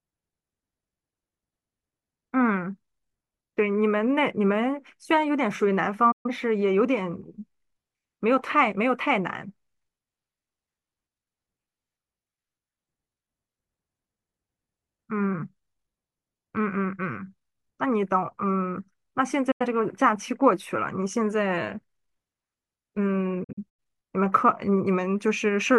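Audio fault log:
6.12–6.30 s, digital broadcast dropout: the receiver stopped getting decodable frames and muted, losing about 128 ms, which fits three frames of roughly 43 ms. An 8 ms fade cuts the speech to silence, then it resumes further on.
19.51–19.66 s, digital broadcast dropout: a shorter mute, about 85 ms, or two frames, leaves a brief hole in the speech.
23.44–23.80 s, digital broadcast dropout: four lost frames, about 171 ms, scattered over 341 ms, with no hole longer than 85 ms, so the speech stutters through several quick gaps.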